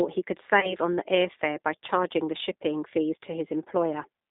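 Throughout, the speech carries G.729 codec damage. It is plainly rough and synthetic, confined to roughly 200 Hz to 3.7 kHz, which fits an 8 kbit/s G.729A stream.

From 0.60 to 0.76 s comes VoIP packet loss concealed by the speech codec. About 30 ms went missing, consistent with three lost frames. The decoder stretched its last pitch and filter into a fading buzzy tone or coloured noise, and the voice stays weak or distorted afterwards.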